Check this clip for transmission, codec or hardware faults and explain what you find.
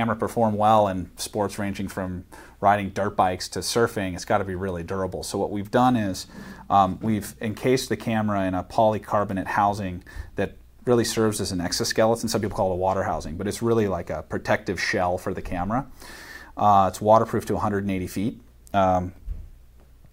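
No faults can be heard.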